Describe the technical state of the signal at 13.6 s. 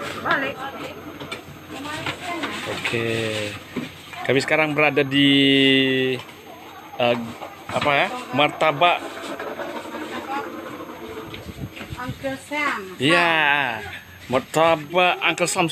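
At 13.6 s, as throughout the clip, a switching supply whistle sits under the sound: a thin high tone wandering between about 6.39 and 6.46 kHz, roughly 35 dB below the signal. A switching power supply running in an audible burst mode or beating with another supply leaks its drifting tone into the audio path.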